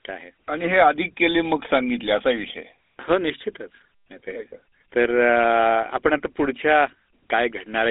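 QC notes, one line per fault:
throughout, GSM full-rate codec: plainly buzzy, gravelly roughness from pulse-excited vocal-tract modelling, unlike clean band-limiting; nothing above 3.8 kHz, which fits 13 kbps GSM.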